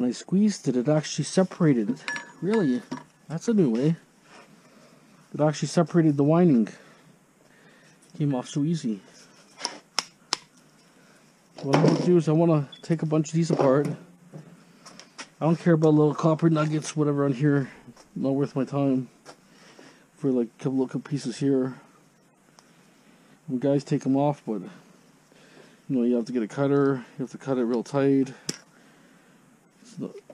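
No dropouts, glitches, level jumps or timing faults anywhere in the clip.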